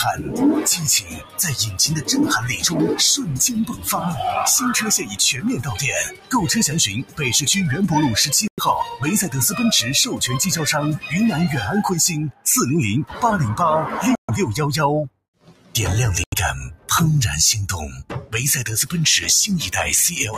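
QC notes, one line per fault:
Throughout: noise suppressor applied to music or sounds. Held and fading sound keeps sinking then recovering, a pumping swing of around 10 dB, because a speech-tuned suppressor treats steady tones as noise.
0.16–2.65 s, 3.68–3.87 s, 5.01–7.21 s, 8.84–9.03 s, 12.31–13.23 s, 15.09–15.75 s, 16.74–16.88 s, 17.88–18.93 s: sound cut by the noise suppressor. Sustained parts dip by about 10 to 17 dB, deepest near 12.3 s and 15.1 s, while onsets pass; the suppressor mistook them for noise.
8.48 s, 14.15 s, 16.24 s: Bluetooth stall. Playback drops to silence for 102, 135 and 87 ms and resumes, likely the headphone buffer running dry while delayed packets were resent.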